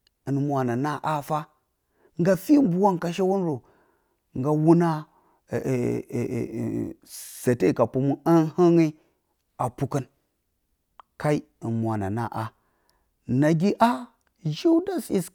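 No faults can be heard in this recording at any point.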